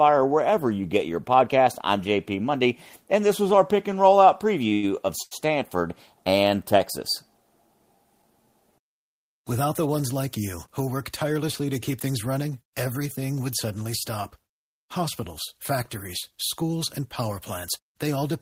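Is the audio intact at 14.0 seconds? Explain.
Yes, at 14.0 seconds the speech plays through intact, with no dropout, glitch or other fault to be heard at that point.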